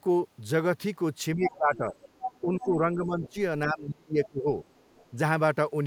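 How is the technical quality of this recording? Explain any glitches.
The speech has two recurring echo-control faults.

Speech suppressed in double talk occurs at 1.35–1.95 s, 2.41–3.36 s and 3.65–4.48 s. The voice dips by up to about 20 dB, 10 dB and 30 dB. The likely cause is an echo canceller ducking everything while both sides spoke.

The other side's voice leaks through at 1.45–1.57 s, 1.96–2.41 s, 2.6 s, 3.23–3.3 s and 4.67–5.1 s. These range from slightly below the talker down to barely audible. Leftover loudspeaker echo likely escaped cancellation.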